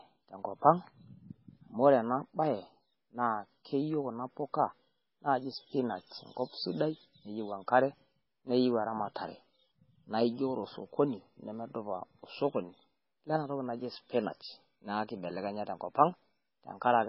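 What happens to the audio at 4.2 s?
At 4.2 s you're hearing the same damage that runs through the whole clip: MP3 compression, and heavy at that. Everything above about 5.6 kHz is simply gone, which is the encoder chopping the treble to save bits. The weak frequency lines that survive flicker on and off from frame to frame, so the speech comes out watery and swirly, with chirpy s sounds and smeared attacks. That level of loss fits a very low bitrate, likely somewhere around 16 kbps.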